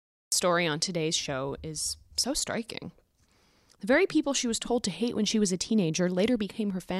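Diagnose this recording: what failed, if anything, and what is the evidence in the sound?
Recording stage: a cut-off start. Digital silence runs to 0.32 s, then speech begins mid-sound with no natural attack. Capture started late.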